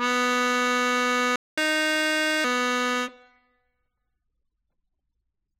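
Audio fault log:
1.36–1.58 s, playback stall: the music drops to silence for about 217 ms mid-flow, likely because the player ran dry or its output thread was blocked, then resumes.
1.58–2.44 s, catch-up at higher speed: the music plays back 1.25 times faster, pitched up roughly four semitones, as the player resamples its backlog to recover lost time, then returns to normal.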